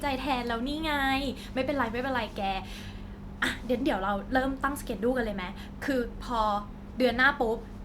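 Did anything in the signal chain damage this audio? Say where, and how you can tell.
No, nothing in the chain audibly damages this speech recording. No stage, from the wiring and converter through to playback, leaves a mark that can be heard.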